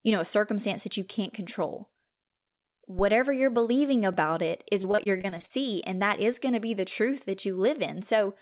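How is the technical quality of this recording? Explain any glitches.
The recording has three distinct glitches: a low thump, a brief skip, and a stretch of choppy, robotic speech. All of it passes through a narrowband call path, heard as a G.711-style codec with nothing above 4 kHz.

Phantom power thump, 2.99 to 3.08 s, just before "you're believing": a supply on the live input was switched, and that sudden DC step travelled through the coupling capacitors into the signal. The result is a deep, low-frequency thud that dies away fast, decaying in about 20 ms, so it is heard as a short dull knock rather than a lingering boom.

Dropped buffer (overrun), at 4.14 s, between "you're believing" and "it is": this is likely a case of the software failing to collect its samples before the hardware overwrote them. That tiny piece, well under 2 ms, vanished and the audio on either side was spliced directly together. 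Nothing falls silent. Instead the waveform jumps where the sound skips forward.

Repeated packet loss (robotic sound), 4.82 to 5.51 s, right after "it is": packets kept arriving late or not at all. Each hole was papered over by extending the last sound, with about 210 ms filled in and about 220 ms missing across roughly ten gaps, the longest 40 ms. With about a third of this stretch concealed, the speech turns choppy, with fragments audibly missing.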